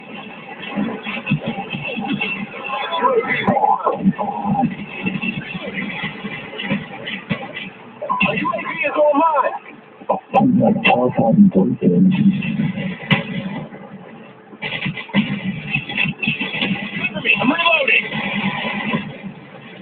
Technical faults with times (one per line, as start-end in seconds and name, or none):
0.00-19.82 noise suppressor applied to music or sounds
0.00-1.81 sound cut by the noise suppressor
2.41-2.66 sound cut by the noise suppressor
4.79-8.02 sound cut by the noise suppressor
9.59-10.33 sound cut by the noise suppressor
13.65-14.63 sound cut by the noise suppressor
19.08-19.82 sound cut by the noise suppressor